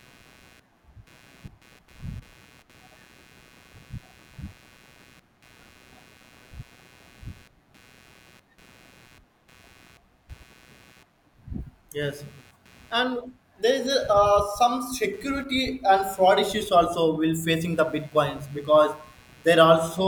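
Throughout the speech there is computer activity noise, a buzzing chirp pulsing at roughly 150 Hz and sitting about 35 dB below the speech. Processor or peripheral load shifts the shared ground, so the noise follows machine activity rather than the speech.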